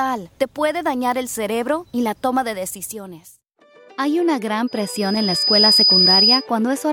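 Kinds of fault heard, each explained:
Overlapping chunks: each 2-second block starts slightly early, so about 6.5 ms plays twice, heard as brief stutters at 1.34 s and 5.35 s.
Loudspeaker feedback squeal: the mic picks up its own speaker and a 5 kHz tone runs away, swelling over about a second from 4.67 s until 6.47 s, peaking about 10 dB above the audio.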